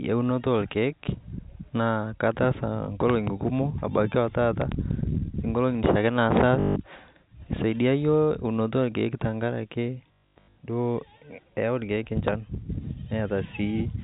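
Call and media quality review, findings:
Loud pops: double pops 3.10–3.29 s and 4.62–4.74 s, single pops 6.37–6.39 s and 12.28–12.30 s, peaking about 10–15 dB above the speech. Likely a transient voltage step from a plug, switch or static.

Packet loss with last packet repeated: robotic stutter 6.60–6.76 s, a continuous 160 ms gap filled by repeating the last packet. Stutter and 50 Hz buzz fit 20 ms packets.

Packet loss with last packet repeated: 380 ms lost, scattered across 10.08–10.56 s, longest run 120 ms. Concealment repeats packets out of step with pitch.

G.711 A-law path at 64 kbps: band-limited below 4 kHz.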